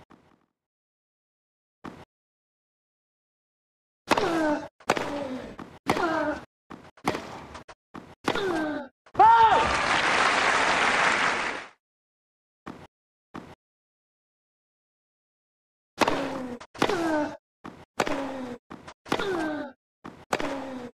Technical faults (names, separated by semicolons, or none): none